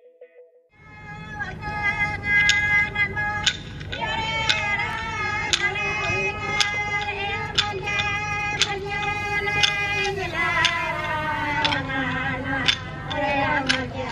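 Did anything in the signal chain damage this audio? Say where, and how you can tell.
Yes. GSM phone buzz enters at the analogue wiring stage, from 9.16 s to 11.53 s. It is a hard, raspy buzz at about 217 Hz, rich in harmonics, sitting about 32 dB below the signal. It is nearly steady across its span and has no relation to the audio content. A nearby 2G phone in a call sends radio bursts 217 times a second. The analogue circuitry rectifies those pulses, turning them into audible buzz.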